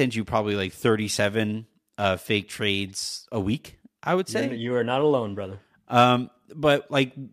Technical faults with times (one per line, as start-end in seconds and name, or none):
none